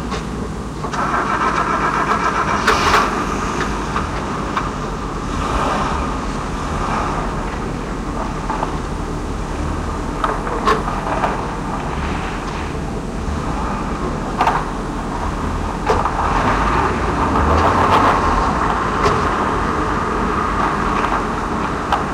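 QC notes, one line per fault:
Throughout, hard clipping: loud moments break into a harsh, gritty fuzz with crackle on the peaks. The signal is driven about 11 dB past what the stage can pass, so around one percent of samples have their tops sliced flat, adding high harmonics.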